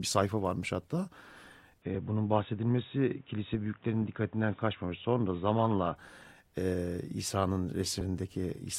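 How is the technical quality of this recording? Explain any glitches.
Two glitches stand out in this speech recording: a stretch where the sound goes dull, and a small jump near the end.

From 1.82 to 5.96 s the audio loses everything above 3.8 kHz and picks up a new noise floor about 35 dB down, with no gap and no level change. It's likely the input switched to a poorer device, a narrower-band mic or headset profile, before switching back.

At 8.00 s the audio jumps ahead where compressed frames were skipped. Roughly 200 ms of audio goes missing, which fits around ten dropped frames of 21.3 ms each.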